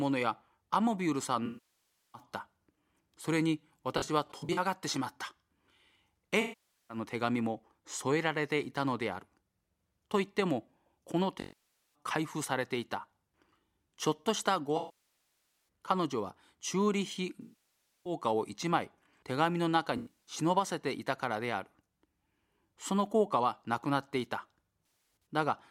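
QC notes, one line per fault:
1.45–2.22 s, 3.98–4.59 s, 6.40–6.97 s, 11.40–11.95 s, 14.77–15.65 s, 17.41–18.13 s, 19.97–20.33 s, 24.79–25.26 s: AAC frame loss with concealment. With frames missing, the decoder rebuilds each gap from the last good spectrum, so the sound turns smeared and noisy, then decays toward silence and fades back in. Five are solid losses of 0.49 to 0.94 s. At 3.98, 19.97 and 24.79 s shorter losses are scattered, giving brief phasey flickers of up to about a tenth of a second.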